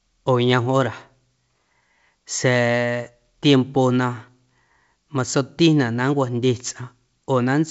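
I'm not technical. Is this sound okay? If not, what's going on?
Yes, nothing here sounds wrong.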